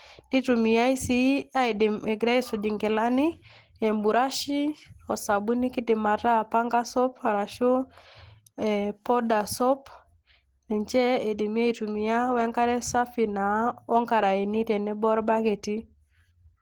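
From start to finish the speech sounds hoarse, rough and grainy, with a muffled quality, yet content extends to about 20.2 kHz, so the bandwidth is not narrowed. This is likely Opus compression at a low rate near 16 kbps, in its hybrid mode, which blends a speech coder below with band filling above. Unlike MP3, the gaps are packed with noise rather than left empty, so there is graininess instead of swirling, warbling artefacts.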